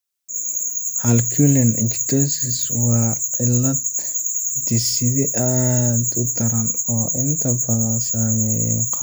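No technical faults can be heard anywhere in the recording.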